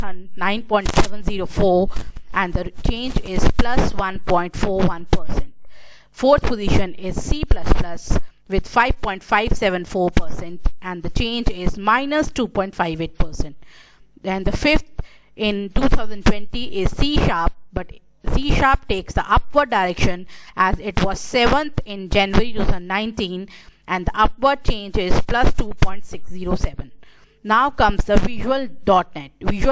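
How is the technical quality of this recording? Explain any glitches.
No technical glitches can be heard in this recording. There is nothing here that needs explaining.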